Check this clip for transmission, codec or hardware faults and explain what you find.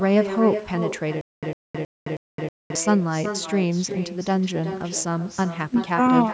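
Two faults can be heard: an echo with no canceller throughout, and a stutter with silent gaps early in the speech.

The echo with no canceller runs through the whole clip. At the far end the call plays on a loudspeaker. That microphone picks it up again, and nothing strips it out. The speech comes back after the network round trip, roughly 0.4 s later. The copy sits about 9 dB below the direct sound. Every phrase gets a quieter, thin shadow trailing behind it.

The stutter with silent gaps runs from 1.21 s to 2.75 s. A 103 ms fragment of speech repeats four times, with 215 ms of dead digital silence after each. The cycle repeats every 319 ms. The likely cause is a stalled player or stream that replays its last chunk on each retry, then runs dry. The steady repeats sound mechanical. Whatever should have played in that stretch is gone.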